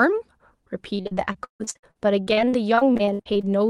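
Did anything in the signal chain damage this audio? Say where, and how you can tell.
Yes, at the network stage. From 0.95 to 3.45 s the speech turns choppy and robotic, with about two dozen dropouts, the longest 156 ms. Repeated packet loss forced the receiver to stretch the last audio over roughly a third of that span, with pieces still missing.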